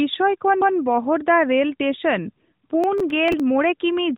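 A CD skip at 0.61 s in this speech: the laser jumps to another turn of the spiral, so a tick and a brief mute of a few milliseconds are followed by playback resuming from a different point. Processor overload crackle runs from 2.84 to 3.40 s, where around ten very short buffers, each under a millisecond, miss their deadlines and are skipped outright. Their hard-edged gaps pile up into a gritty tearing laid over the sound, heard through the narrowband mobile channel, where AMR-NB at 12.2 kbps passes nothing above 3.8 kHz.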